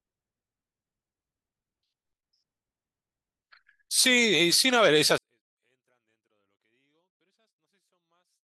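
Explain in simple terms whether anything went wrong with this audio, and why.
Something went wrong at 5.18 s. From there to the end, the speech suddenly drops to near silence but stays clean. This is a 24-bit alignment error. The samples sat in the low part of a larger slot, and were read as if they filled it, so every value came out tiny.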